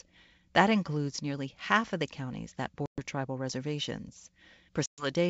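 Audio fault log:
2.86–3.01 s and 4.86–5.07 s, packet loss on an ADPCM call: the speech drops into hard-edged silence for about 120 ms each time, roughly seven packets' worth. The waveform shows a flat gap, and the spectrogram shows a blank column across the full band. When the sound resumes, the decoder's predictor and step size no longer match the sender's, so the speech returns with some distortion. On the spectrogram this appears as a smeared onset. It settles within some tens of milliseconds into the clear wideband G.722 sound.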